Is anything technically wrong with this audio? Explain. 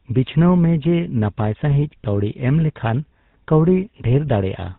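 Yes, there are two codec faults in this speech.

Throughout, the GSM full-rate codec is plainly audible, with a character that fits the 13 kbps full-rate mode. The codec models the vocal tract and excites it with sparse regular pulses, keeping only a third of the excitation detail, so the speech sounds buzzy and gravelly. Nothing reaches above 4 kHz. A plain low-pass filter would only dull the sound and leave no roughness.

From 2.02 to 2.05 s there are lost GSM frames, a gap that fits a single 20 ms frame. The decoder replays the last good frame's settings, which causes a brief rough, metallic ring. A hard dropout would fall silent or click instead of sustaining this held, buzzy tone.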